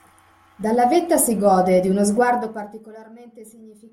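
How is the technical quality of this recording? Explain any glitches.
One glitch stands out: a burst of zipper noise on the speech from 2.2 to 2.92 s. Over those 0.72 s a fine ticking, close to a buzz, rides on the voice while it drops by roughly 25 dB. The cause is a gain fade applied in bare 1 dB jumps, about fifty a second, rather than as a smooth ramp. Each jump is an abrupt change in the waveform and clicks faintly, and the chain of clicks forms the zipper.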